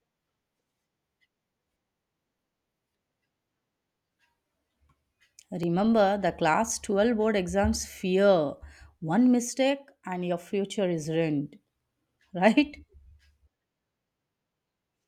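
Clock drift buffer slips run from 0.23 s to 14.29 s in this speech recording, heard as about fifteen regular clicks every 1.08 s. They are likely caused by two devices on separate clocks, around 700 ppm apart, which fits a few dozen samples being dropped or repeated at each slip.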